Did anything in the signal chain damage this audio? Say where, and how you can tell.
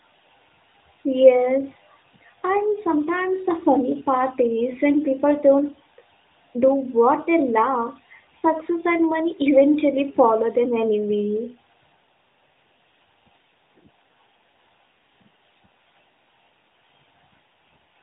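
Yes. There are lost AMR speech frames at 8.40 to 8.43 s, between "do what they love" and "and money", at the network stage. The speech briefly dips or warbles for about 20 ms, which fits a single lost AMR-NB frame. A radio error corrupted that frame, so the decoder rebuilt it from the previous frame's pitch and vocal-tract settings at reduced gain. That papers over the gap but leaves a short smeared blip. The narrowband codec's 4 kHz ceiling is audible throughout.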